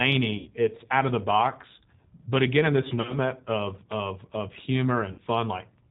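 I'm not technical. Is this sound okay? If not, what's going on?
No. The call was squeezed through the G.729 codec, a phone-line compressor that rebuilds speech cheaply. Throughout, the speech sounds muffled, slightly rough and a bit artificial.

Bits of the call also went missing in transit, at 0.38 to 0.50 s, 2.89 to 3.17 s, and 5.12 to 5.21 s. This is VoIP packet loss concealed by the speech codec: the decoder filled the gaps by guessing, so the sound turns briefly into a buzzy tone or a hiss that fades, then stays weak or distorted for a moment afterwards.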